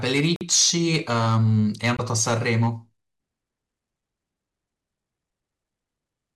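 From 0.04 to 2.67 s the speech carries a harsh fuzz on every loud moment. This is hard clipping: the signal was driven about 10 dB beyond what a stage could pass, so its peaks were cut flat. Within that stretch the sound drops to silence for 48 ms at 0.36 s and for 20 ms at 1.97 s, then resumes. These gaps are likely Bluetooth stalls, where held-up packets let the headphone buffer run dry.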